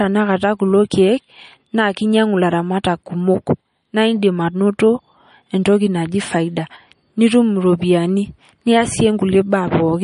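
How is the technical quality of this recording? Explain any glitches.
The recording is plainly degraded by likely MP3 compression at a low bitrate, which fits roughly 40 kbps, across the whole clip. Starved of bits, the encoder cuts everything above about 10.6 kHz and drops weak frequency lines that flicker between frames, so the speech sounds dull, watery and swirly, with metallic chirps on s sounds and smeared consonant attacks.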